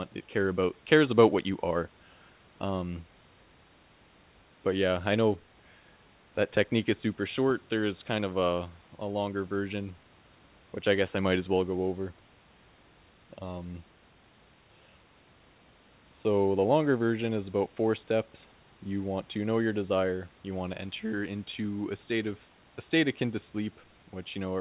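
Nothing goes wrong anywhere in this speech clip; the narrow, phone-like sound with nothing above 4 kHz comes from the call codec doing its normal job, and the faint room noise sits about 34 dB below the speech as part of the recording itself.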